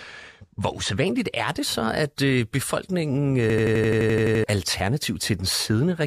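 From the start to about 1.07 s, before "er det så at", there's channel delay (comb filtering). One side lags a couple of samples, so the mono sum cancels up top from around 10 kHz and sounds dull.

Then at 3.50 s, right after "så at øh befolkningen", a system hang loop kicks in until 4.44 s. An 85 ms chunk repeats 11 times, stuttering at 11.7 Hz, which fits a 4096-sample buffer, and roughly a second of audio gets lost.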